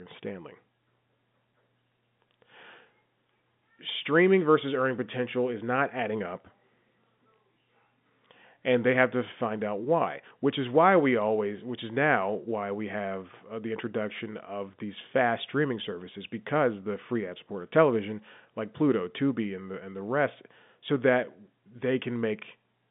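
No technical faults detected.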